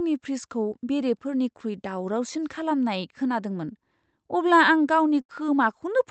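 At 0.69 to 0.73 s, just before "बेरेफोरनिख्रुइ दावरावसिन", a brief smear flattens the speech for an instant. This is short concealed packet loss: about 20 ms never arrived in time, and the receiver extended the preceding sound across the gap before blending back.

From 5.21 to 5.31 s, right after "अब्ला आं", the speech stretches into a held, fading sound and then picks up further along. This burst of packet loss left about 80 ms unreceived. The decoder continued the last sound and let it decay, so that stretch of speech is missing. The call path's Opus coding, band-limited to about 8 kHz, adds its usual coding noise throughout.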